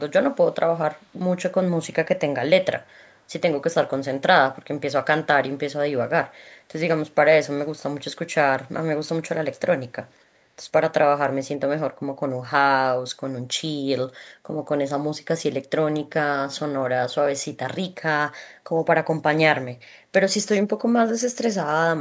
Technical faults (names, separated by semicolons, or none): echo leak